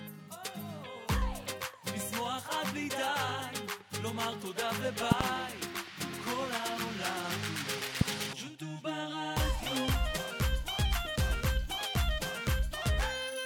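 At 5.12 to 5.23 s there's a loud pop, a quick double thump well over the sound; another single, louder pop hits around 8.01 to 8.04 s, likely a voltage spike from a switch or static.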